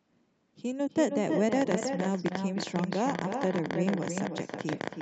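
From the first syllable to the end of the 5-second recording, every phrase of the speech is trailed by an echo with no canceller. The far end appears to be playing the call through a loudspeaker that its microphone picks up again, and nothing subtracts it. That copy returns roughly 300 ms later at about 6 dB below the direct speech. Because it is that strong, it reads as a thin doubling rather than a faint tail.

From 1.53 s until the end, a train of clicks runs over the audio at about 11 per second. The spacing is irregular rather than metronomic. Each click has much the same sharp shape and peaks around 15 dB above the speech, so they cut through clearly as a ragged ticking, continuing through pauses as well as speech. The likely source is electrical interference or a faulty connection or power supply injecting repeated pulses. The speech itself stays band-limited to 8 kHz, as expected from the Opus call path.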